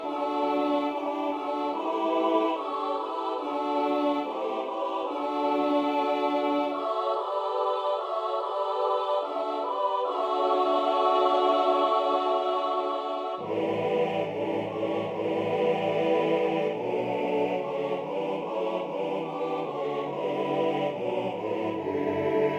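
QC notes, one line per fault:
No faults found. Nothing in the audio calls for a QC entry.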